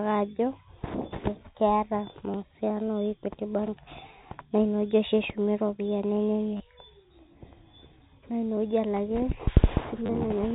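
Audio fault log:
2.31–2.34 s, 6.57–6.60 s and 10.06–10.09 s: packet loss with last packet repeated. Each time 30 ms of audio went missing, which fits three lost 10 ms packets, and the receiver replayed the last packet. The repeat buzzes near 100 Hz as a brief robotic stutter.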